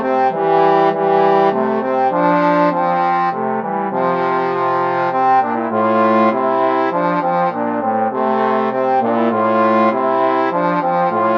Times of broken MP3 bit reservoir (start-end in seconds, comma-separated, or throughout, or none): none